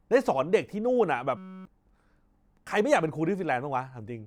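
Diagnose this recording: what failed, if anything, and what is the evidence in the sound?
System hang loop at the driver-buffer stage, 1.37–1.65 s: one 5.33 ms chunk, fitting a 256-sample buffer, repeats as a 188 Hz buzz, showing identical waveform cycles and flat spectrogram stripes.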